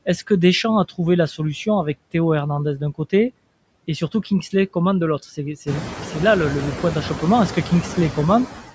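Noise suppressor artifacts run through the whole speech recording. The suppressor pulls what it judges to be steady background down by about 19 dB, working frame by frame, so the gaps between phrases sink toward silence and the noise swells back up under the voice. The room noise climbs by about 14 dB at around 5.5 s, and the voice is band-limited to nothing above 8 kHz by the call path.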